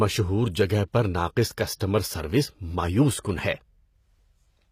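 HE-AAC compression runs throughout this short speech clip. The upper frequencies sound bright but synthetic, with nothing present above 15.5 kHz, and the codec damage is plainly audible: the treble no longer sits in harmonic alignment with the lower spectrum, giving sibilants a gritty, metallic edge. That points to a low-bitrate setting, on the order of 24 kbps, where only the lower band is coded properly and the top is likely regenerated by copying lower bands upward under a coarse spectral envelope. Pre-echo appears from 1.75 to 1.80 s: a short hiss of about 56 ms arrives just ahead of a sharp onset, and the attack itself sounds softened and smeared. The transform block containing that onset spreads its quantisation noise across its full length, so noise sized for the loud transient also fills the quiet stretch that precedes it.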